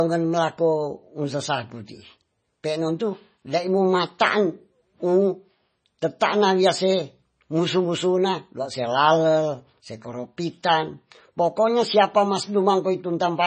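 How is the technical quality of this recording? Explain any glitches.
Poor: heavy lossy-coding damage runs through the whole speech recording. Throughout, likely MP3 compression, which fits a bitrate around 24 kbps, cuts everything above 9 kHz and lets weak frequency lines flicker between frames, sounding dull and watery.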